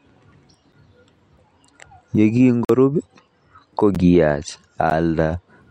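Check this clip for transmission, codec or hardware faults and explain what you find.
Four blocks of digital silence interrupt the speech, at 0.72 s (about 8 ms), 2.65 to 2.69 s (about 46 ms, which fits a 2048-sample buffer), 3.95 s and 4.90 s (about 12 ms each, fitting a 512-sample buffer). Each time the output buffer likely went unfilled and was zeroed, so the sound cuts to silence with no fade. The short ones are ticks and the longer one a brief hole. Unlike a faded dropout or concealed packet loss, there is no fade and nothing fills the gap.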